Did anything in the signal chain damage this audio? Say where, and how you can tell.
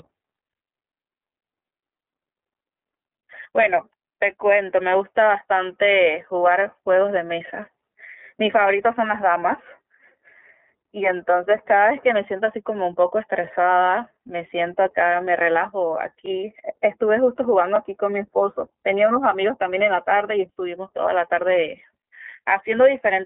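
Yes. The codec stage did most of it. The iLBC codec runs throughout. Nothing above 3.6 kHz survives, and the band sounds like a 250 Hz to 3.4 kHz phone line. Each 30 ms frame is coded on its own, which fits the 13.33 kbps mode, and that leaves plainly audible damage, with the speech a little rough and synthetic.

Then there's a block of digital silence at 16.26 s, a hard drop to silence lasting about 9 ms with no fade either side. You hear it as a tick. That points to the driver or buffer stage failing to fill the output in time.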